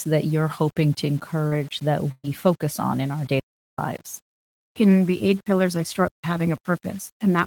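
The clip is speech, and throughout it the signal has likely been reduced to low bit depth without dither, rounded to about 7 bits. The rounding error tracks the voice at roughly 30 dB below it, so quieter syllables and decays turn grainy and gritty. At 1.47 s, right after "hoping to", there is a short concealed packet loss: about 40 ms never arrived and the decoder extended the preceding sound to fill it, leaving a brief smear before normal audio returns at 1.53 s. From 2.11 to 2.26 s, just before "focus on in our", a burst of packet loss removed about 120 ms. Concealment stretched the last sound into a held, fading fill and then gave way to roughly 20 ms of silence before the audio picks up further along. Two digital wireless dropouts follow, where the link lost too much data and the receiver muted with a very fast fade. The first runs from 3.40 to 3.78 s, about 390 ms, immediately after "on in our day", and the second from 6.08 to 6.24 s, about 155 ms. 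Both are clean holes of near silence with no noise burst at either edge.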